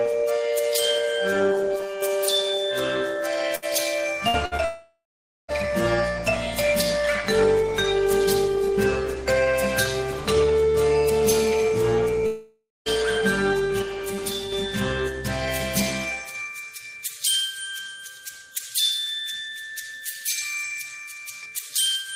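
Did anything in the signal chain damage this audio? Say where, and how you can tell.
Yes. Two sudden gain jumps: the level, background noise included, falls by about 5 dB from 1.76 to 2.02 s and by about 6 dB from 13.82 to 14.52 s, stepping down and back up with no ramp. On a waveform the envelope shows square-edged steps, and a spectrogram darkens uniformly across all frequencies at once. The likely cause is a gain setting applied instantly in call processing or the driver stage.

A burst of packet loss occurs at 3.55 s, 4.28 s and 4.46 s, with about 60 ms of audio missing each time. The receiver patched each gap with roughly 50 to 70 ms of repeated, decaying sound before resuming further along. On a spectrogram each patch appears as smeared sound that fades, then a hard seam where fresh content begins. This is a network-stage fault.

There are two long network dropouts. From 4.65 to 5.51 s about 0.84 s of audio never arrives; concealment holds and fades the last sound, then roughly half a second of silence follows. 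From 12.26 to 12.89 s about 0.6 s is lost, with about 0.2 s of silence. The waveform shows a tapering tail into a flat line, and the spectrogram shows a blank band. The likely cause is a network stall rather than local processing.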